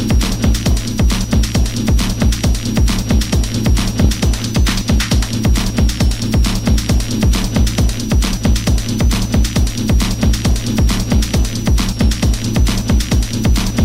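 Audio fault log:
throughout switching supply whistle: a faint high whistle wandering between 5.4 and 6.1 kHz, roughly 25 dB under the audio, from a switching power supply running in audible burst mode or beating with another supply.
4.04 s repeated frames: a brief stutter as 10 ms of audio plays twice, which fits one compressed frame being sent twice and lengthens the audio by 10 ms.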